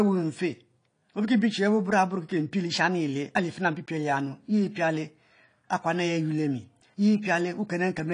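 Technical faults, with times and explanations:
Throughout: AAC compression. The speech is dull and smeared, with nothing above 10.2 kHz and a fizzy, warbling edge on sibilants. This is likely low-bitrate AAC-LC coding, which fits about 32 kbps: the encoder lowers its cut-off and quantises coarsely, leaving spectral holes.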